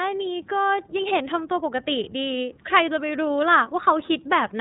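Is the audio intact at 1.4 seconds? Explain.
No, not really. At 1.4 seconds, as everywhere else in this speech clip, you're hearing iLBC codec damage, and it's plainly audible. The band stops at about 3.8 kHz, so everything sounds muffled and telephone-like. Each short block of the voice's excitation is coded on its own without drawing on the one before, which gives that slightly rough, synthetic edge. The grain fits 30 ms frames at around 13.33 kbps.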